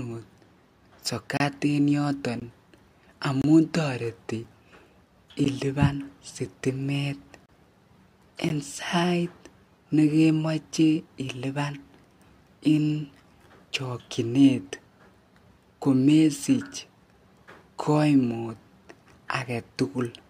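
Gaps between stream segments: adjacent one-second segments carry time stamps that don't quite meet, and the player fills each hole with silence. The speech drops out with hard edges at 1.37–1.40, 2.40, 3.42–3.44, 4.44, 5.44, 6.46, 7.46–7.49 and 8.49 s, lasting about 4 to 29 ms, roughly once per second. No audio is lost.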